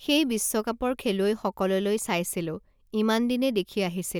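No technical faults are audible.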